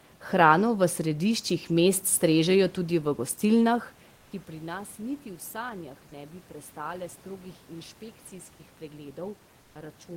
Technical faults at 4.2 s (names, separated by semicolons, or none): comfort noise in place of the background